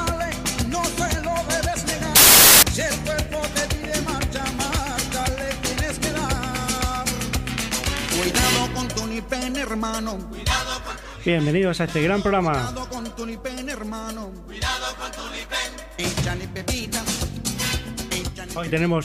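At about 2.16 s the audio suddenly turns into a blast of loud, harsh broadband noise. It holds until roughly 2.63 s, close to half a second. That's samples built from the wrong bytes. For that stretch the reader is assembling each sample incorrectly, maybe offset by a byte or with the byte order flipped. So the jittery low-order bits end up acting as the big part of every value, and what you hear is hiss in place of signal.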